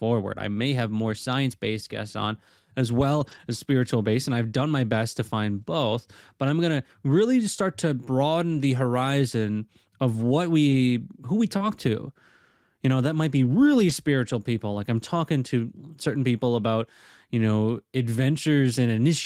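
Packets went missing from the stream, and the decoder replayed the low-bitrate copies carried in the following packets, so the lost packets were rebuilt from error correction. This happens from 3.19 to 3.37 s, between "based guests on as" and "as spiritual based and", a rebuilt stretch of about 100 ms that fits five separate packets. It happens again at 5.57 to 5.63 s and 8.51 to 8.57 s, about 40 ms each, and at 10.71 s. In these moments the speech turns briefly rougher and noisier with no gap.

Just after "who we", from 11.57 to 11.62 s, there is short concealed packet loss. About 20 ms arrived too late, and the receiver extended the preceding sound to fill the gap, adding only a few milliseconds before blending back, which leaves a brief smear. A rebuilt packet also falls inside this stretch at 11.59 s. Single rebuilt packets follow at 13.89 s and at 14.73 s, just before "like i'm talking to", each a roughening.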